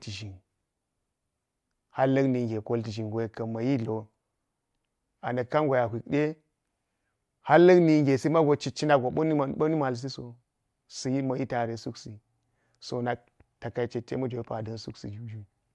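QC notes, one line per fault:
No faults were heard anywhere in the speech. There is nothing to log for this clip.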